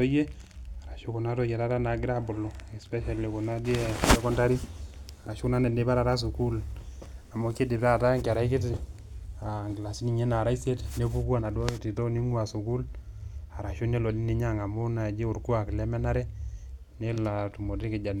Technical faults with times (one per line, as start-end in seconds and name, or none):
17.15-17.17 corrupt frame concealed